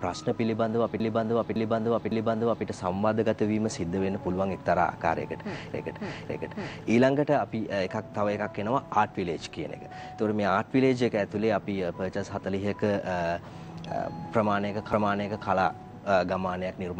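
Repeated frames occur at 1.00–2.67 s, 5.74–6.85 s and 14.93–15.49 s. A block of about 0.56 s, which fits six compressed frames, plays again three times, twice, then once, so the sound stutters and the audio is stretched by about 1.67 s, 1.11 s and 0.56 s.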